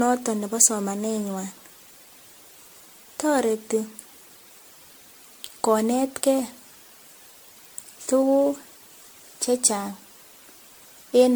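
From start to finish the speech carries generation loss: a swirly, hollow character with smeared consonant attacks and a watery shimmer, worse than a single MP3 pass near 96 kbit/s would give. The likely cause is repeated MP3 decoding and re-encoding, around ten passes, each quantising again on a shifted frame grid so that noise and spectral gaps accumulate. Content stops at about 19.9 kHz.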